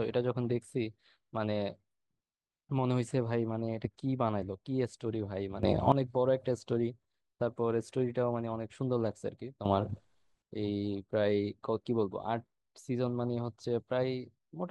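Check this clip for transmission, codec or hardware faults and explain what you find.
Two sudden gain jumps interrupt the speech, at 5.63 to 5.92 s and at 9.65 to 10.42 s. Each time the level leaps by about 12 dB and then drops back. The likely cause is a gain setting applied without a ramp. Speech and background noise rise together instantly, with no gradual AGC-style swell, and snap back just as abruptly.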